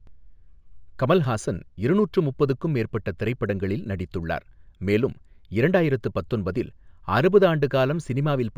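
Speech, with imaging from linear upsampling present throughout. The top end is dulled, and a faint mirrored copy of the spectrum sits between 8 kHz and 16 kHz, roughly 40 dB below the signal, adding a light metallic shimmer to sibilants. The straight-line interpolation points to a 16 kHz source raised to 44.1 kHz. Unlike aliasing, nothing folds down into the voice band; the artefacts appear only above it.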